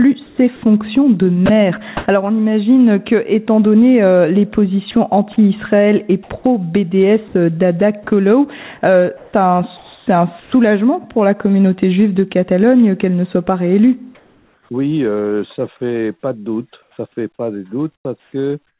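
The audio runs through a narrowband call path, with nothing above 4 kHz, which fits G.711 A-law at 64 kbps. From 0.26 to 2.06 s and 4.91 to 10.52 s, the sound is chopped by the voice detector. Edges drop out for brief fills of synthetic noise, about 0.3 s and 0.84 s in total, likely from RFC 3389 comfort noise. Comfort noise also replaces the background at 14.15 to 14.69 s and 16.82 s to the end. A flat, featureless hiss stands in for the real background, about 2 dB quieter in the first stretch, likely because transmission paused.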